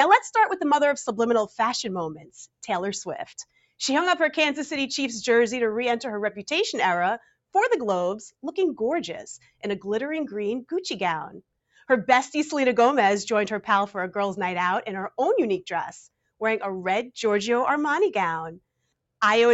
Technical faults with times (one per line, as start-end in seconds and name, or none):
2.16-2.63 sound cut by the noise suppressor
3.40-3.80 sound cut by the noise suppressor
9.38-9.63 sound cut by the noise suppressor